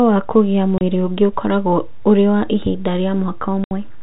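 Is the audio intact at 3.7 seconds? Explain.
No. From 3.64 to 3.71 s the speech drops into a 70 ms hole of dead silence, with hard edges as the sound cuts out and snaps back. This is packet loss filled with silence: the receiver had nothing for that stretch and played silence rather than concealing the gap. A 70 ms hole fits several consecutive lost packets, around seven at 10 ms each. The surrounding audio keeps its G.711 telephone band-limit.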